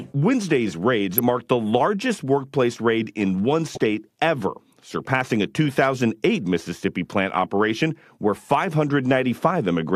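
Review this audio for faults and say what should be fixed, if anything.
DAB burbling at 1.18 s and from 3.73 to 3.84 s over the speech: weak reception leaves uncorrected bit errors, around a fifth of a percent, that corrupt MP2 samples and scale factors, so individual sub-bands blip with noise or jump in level. Prevent it with a better-sited antenna or stronger signal.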